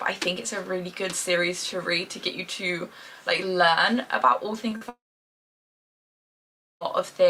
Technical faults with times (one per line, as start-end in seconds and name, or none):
4.69-4.83 short concealed packet loss
4.89-6.83 long network dropout